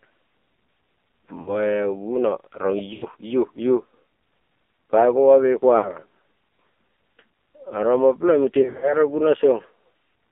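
Throughout, the speech passes through the AMR narrowband mobile codec at a very low bitrate, about 5.9 kbps. It confines the sound to 250 Hz to 3.5 kHz and makes it buzzy and synthetic. Lost AMR speech frames occur at 1.42–1.62 s, 2.94–3.05 s, 5.78–5.99 s (after "bai goma me") and 8.62–8.93 s. At each, the decoder stretches the last sound and fades it, causing brief warbling dips.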